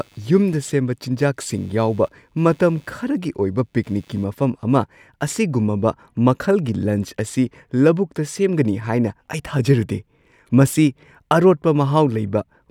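Shifting computer load disturbs the audio circuit's shared ground, causing computer activity noise from 0 to 4.24 s: a faint buzz pulsing near 100 Hz, about 40 dB below the speech.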